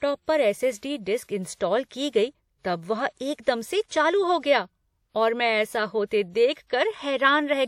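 A speech clip with pre-echo ahead of three attacks, at 0.78 s, 1.24 s (before "इंस्टॉल की गई तब") and 3.85 s (between "तब वह एकदम से" and "चालू हो गया और"). Each shows roughly 50 to 57 ms of hiss before the onset, where the transform codec's block-wide quantisation noise spills into the quiet lead-in and softens the attack.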